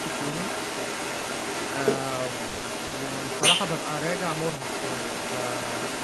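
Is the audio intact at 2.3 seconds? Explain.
No. At 2.3 seconds, and across the whole clip from 0 to about 6.04 s, there is the other side's voice leaking through. The likely cause is that the talker's device played the far end on a loudspeaker and the echo canceller failed to strip it from the microphone signal. A second voice therefore runs alongside the main speech at roughly equal loudness, so the two compete rather than the echo sitting faintly underneath.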